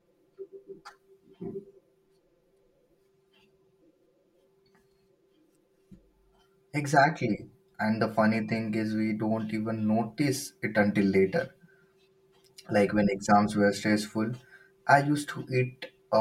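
Throughout, channel delay (comb filtering) leaves the speech hollow: one channel lags about 5 ms, carving fixed notches from roughly 100 Hz upward, with no reverb-like decaying tail.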